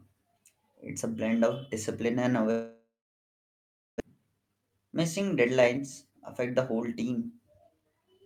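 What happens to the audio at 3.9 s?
At 3.9 s the audio is still silent, inside a gap from 2.51 to 4.02 s after "blend of discipline and". The last sound fades as a brief buzz or hiss, then silence, likely from a long network dropout. About one second of audio never returns, and timing shifts by roughly half a second.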